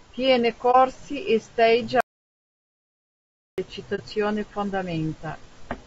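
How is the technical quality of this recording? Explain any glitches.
The recording is compromised: the speech carries plainly audible codec damage throughout, and it is broken by two short muted holes and one long dropout to silence.

Low-delay AAC compression is the likely cause of the roughness heard across the whole clip. AAC-ELD's short frames resolve pitch harmonics poorly, and at a rate that fits roughly 32 kbps the speech turns grainy, with noise between harmonics and a thin, synthetic-sounding top band.

AAC frame loss with muting occurs at 0.71–0.76 s, just before "e stage", and again at 3.95–4.00 s. Each time, about 30 ms of coded audio went missing and the decoder zeroed that spectrum. The overlapping windows fade the sound out and back in, leaving a brief dip.

An audio dropout to silence runs from 2.01 to 3.58 s, right after "e stage", lasting about 1.6 s. The input was likely lost while recording continued, writing silence. 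The speech cuts off mid-flow into total silence with no room tone, and whatever was said there is gone.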